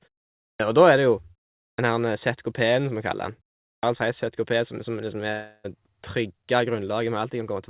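Speech passing through a narrowband call path, with nothing above 4 kHz (consistent with G.711 mu-law at 64 kbps), shows a clipped start after a pause three times. At 0.53 s, 1.72 s and 3.76 s, speech resumes after silences of about 0.53 s, 0.45 s and 0.43 s, and roughly 65 to 70 ms of each onset is missing, so the first sounds are cut off and the speech snaps in abruptly. The pauses between phrases are not the problem. The fault is the output device going idle in those pauses and needing time to wake, which swallows the beginning of the next phrase. That it happens only after pauses, and always costs a similar short slice, separates it from random packet loss. From 5.32 to 5.66 s there is what sounds like a long network dropout, likely caused by no packets arriving for about 320 ms. The gap is filled with a decaying continuation of the last sound instead of going quiet, and speech picks up afterward with that stretch simply gone.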